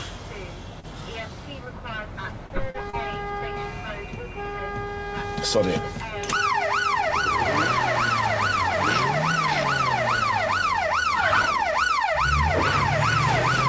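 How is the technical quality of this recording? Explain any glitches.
The recording has five brief glitches in its first three seconds, all from network timing on a call path whose band stops near 8 kHz, consistent with a wideband call codec.

Short concealed packet loss at 0.80, 2.70 and 2.90 s: about 40 ms never arrived, and the receiver extended the preceding sound, heard as a brief smear or wobble.

Short stalls from a late packet at 1.65 and 2.47 s: the jitter buffer ran dry, so the last sound was held 16 ms and 35 ms, a slight drawn-out buzz.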